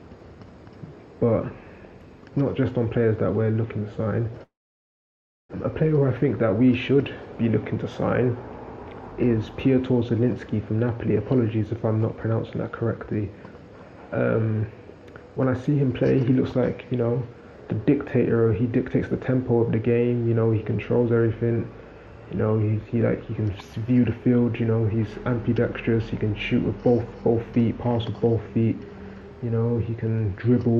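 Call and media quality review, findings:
Long network dropout, 4.43 to 5.55 s. The sound breaks off and the last bit is stretched into a fading buzz. Then about 1 s of near silence. Audio resumes with roughly 1 s of content missing. Likely cause is packet loss on the network path. The receiver's concealment filled the gap, then muted. The delay shifted by around 50 ms across the gap.

Jitter buffer speed-up, 6.23 to 6.99 s. Playback runs about 7% fast at unchanged pitch and sounds slightly hurried. Jitter buffer on the receive side. It held more audio than its target. It trimmed short pitch-period pieces back to back, cutting around 70 ms in total to bring latency down to target.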